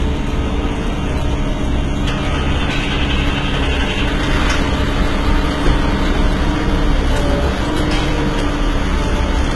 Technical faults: HE-AAC compression

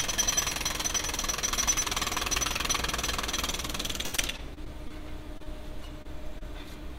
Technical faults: repeated packet loss (robotic sound); short concealed packet loss

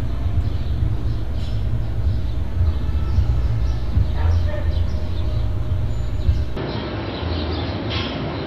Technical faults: input switched to a poorer device

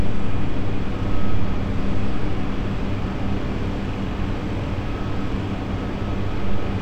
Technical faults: none

